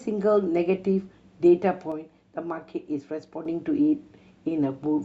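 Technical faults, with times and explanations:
1.92–3.45 s: one channel drops out, likely; the speech falls abruptly by about 6 dB because only one stereo side remains in the mono sum.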